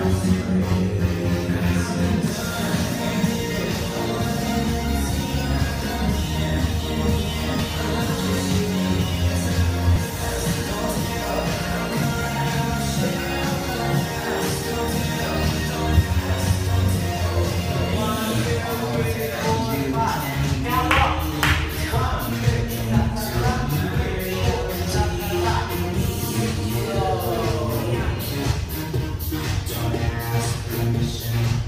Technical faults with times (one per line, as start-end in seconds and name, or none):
3.64 dropped buffer (overrun)
4.68 dropped buffer (overrun)
7.60 dropped buffer (overrun)
9.96 dropped buffer (overrun)
13.16 dropped buffer (overrun)